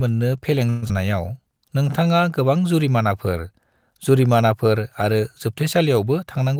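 From 0.69 to 0.91 s a long network dropout is the likely cause: packets stopped arriving, and the receiver filled about 197 ms by stretching the last sound into a fading buzz. The speech then returns with roughly 80 ms missing, the delay shifted by around 50 ms.

Between 1.42 and 2.09 s comes a jitter buffer slow-down. The receiver rebuilt its reserve by repeating single pitch periods, adding 76 ms. The speech plays at 90% speed at unchanged pitch, with sounds drawn out.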